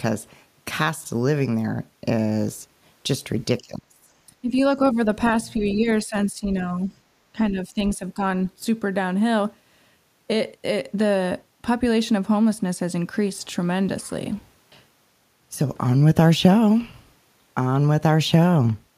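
A speech clip in which the talker's voice sinks and thins in a cluster of dips between 3.6 and 8.2 s. The deepest is at 3.6–4.1 s, a drop of about 25 dB lasting roughly half a second. Shorter dips follow at 4.41–4.52 s (about 15 dB) and 4.94–5.07 s (about 5 dB). A shallower, patchy stretch runs from 5.55 to 6.92 s, and a final dip of about 10 dB comes at 7.33–8.23 s. This is speech suppressed in double talk. The likely cause is that the far end spoke at the same moment, and the echo canceller, unable to tell the local talker from loudspeaker echo, pulled the whole signal down. Within that overlap, at 5.68–5.75 s, a brief faint scrap of the other side's voice leaks through, about 20 dB below the talker. That is likely residual loudspeaker echo the canceller failed to remove from the microphone.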